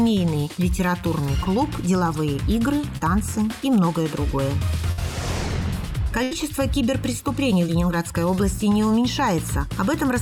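At 1.43 s and 2.97 s, short concealed packet loss: about 20 ms of audio failed to arrive, and the receiver filled the hole by extending the preceding sound, leaving a brief smear. At 4.92 s and 6.23 s, a burst of packet loss drops 60 ms and then 80 ms; the last sound is held and faded before the audio resumes further on. At 7.67 s, a further 20 ms of concealed loss produces a short blur.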